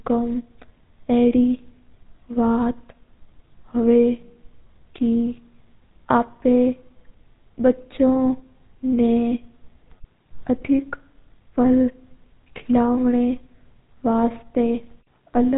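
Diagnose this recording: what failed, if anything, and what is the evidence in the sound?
GSM full-rate codec damage throughout, at the codec stage. The speech is buzzy and gravelly with nothing above 3.8 kHz, which fits 13 kbps pulse-excited vocal-tract coding.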